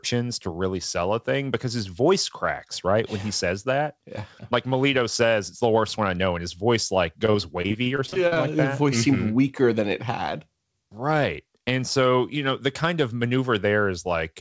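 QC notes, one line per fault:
7.26–8.37 s, repeated packet loss (robotic sound): right after "and his voice like", packets kept going missing or arriving late, leaving a dozen or so short holes, the longest around 39 ms. Each hole was patched by extending the sound just before it, so roughly a quarter of this stretch is filled-in rather than real. The result is choppy, robotic audio until "like that". The call codec, which fits G.722, carries nothing above 8 kHz.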